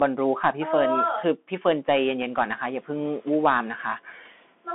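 Throughout, the speech carries the Bluetooth CVSD headset codec: nothing above 3.8 kHz survives, s sounds turn scratchy, and a granular hiss sits under everything. That hiss and the slope overload on loud high sounds, rather than plain band-limiting, point to CVSD's one-bit coding, which fits a 64 kbps stream.

From 1.87 to 2.11 s the noise suppressor is catching up. Room noise jumps by about 21 dB around two seconds, and for roughly 240 ms it comes through with only about 5 dB of reduction before sinking. The noise changes level without gating on and off with the speech.

From 4.16 to 4.29 s the speech is cut by the noise suppressor. Part of the speech is pulled down by up to about 9 dB, over about a tenth of a second, so it sounds swallowed. Here the speech itself dips, turned down along with the background.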